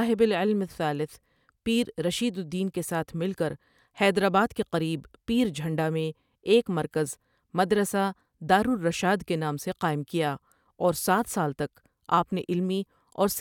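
No technical faults occur anywhere in the speech, so there is nothing to describe in time order.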